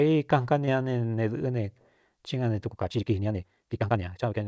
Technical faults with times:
0.66-0.69 short concealed packet loss
2.68-4.47 time-stretched section

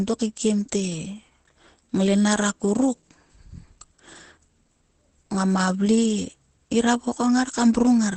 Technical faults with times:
0.00-8.17 Opus compression

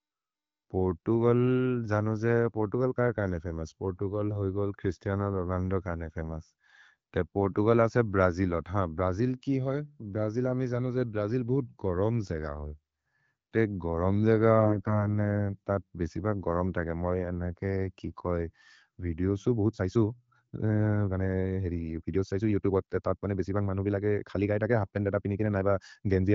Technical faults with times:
14.58-15.07 AMR bit errors
19.53-26.34 time-stretched section

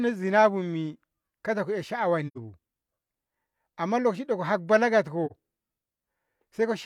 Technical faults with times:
2.27-2.37 AAC frame loss with muting
5.26-5.32 AAC frame loss with muting

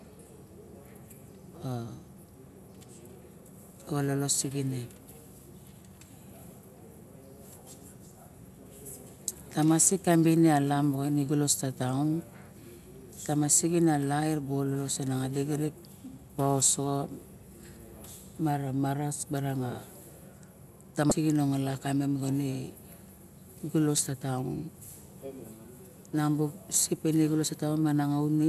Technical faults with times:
21.08-21.12 damaged data in a compressed stream
23.97 damaged data in a compressed stream

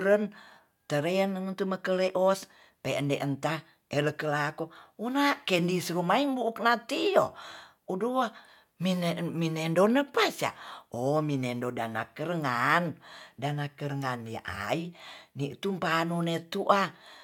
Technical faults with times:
none

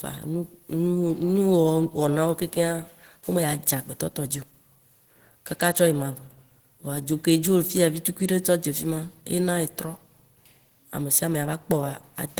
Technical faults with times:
0.00-12.40 Opus compression

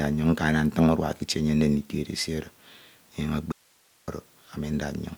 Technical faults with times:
3.52-4.08 audio dropout to a faint residue

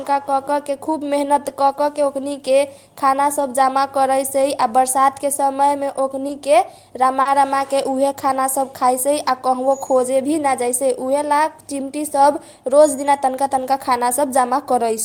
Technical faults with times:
1.67-1.77 lost packet rebuilt from error correction
3.39-3.41 lost packet rebuilt from error correction
4.41-4.43 lost packet rebuilt from error correction
6.27-6.31 short concealed packet loss
6.29-6.31 lost packet rebuilt from error correction
7.21-7.27 short concealed packet loss
7.25-7.31 lost packet rebuilt from error correction
8.77 lost packet rebuilt from error correction
10.67-10.73 lost packet rebuilt from error correction

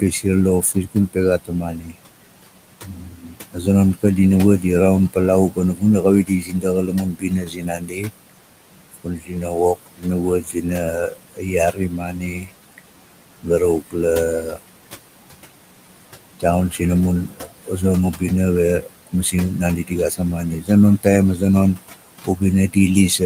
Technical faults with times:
0.00-23.25 noise suppressor artifacts
0.00-4.04 speech cut by the noise suppressor
4.60-18.22 speech cut by the noise suppressor
18.80-23.25 speech cut by the noise suppressor

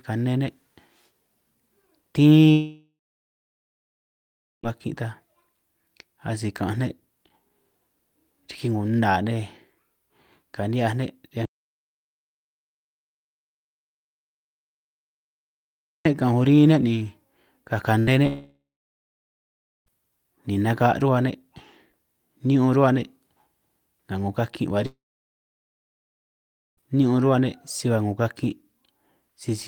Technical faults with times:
2.51-4.66 long network dropout
11.45-16.05 audio dropout to silence
17.99-18.10 burst of packet loss
18.27-19.89 long network dropout
24.86-26.80 long network dropout

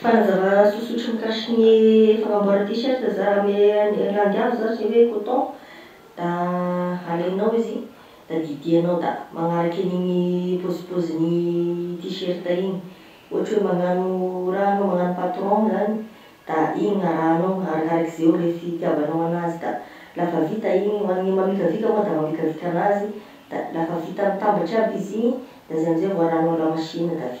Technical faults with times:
none

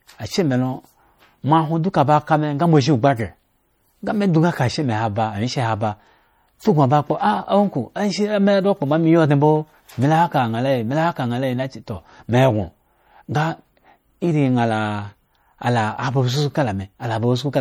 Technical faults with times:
0.00-17.60 MP3 compression
0.15-17.60 clock slip clicks

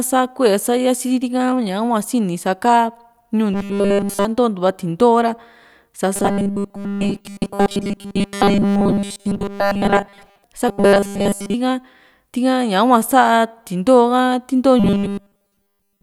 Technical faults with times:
3.53-4.25 robotic sound from repeated short buffers
6.16-10.43 robotic sound from repeated short buffers
10.68-11.54 robotic sound from repeated short buffers
14.80-16.03 robotic sound from repeated short buffers

